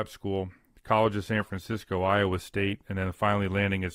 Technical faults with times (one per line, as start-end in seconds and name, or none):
1.34-3.95 adaptive stream at a lower bitrate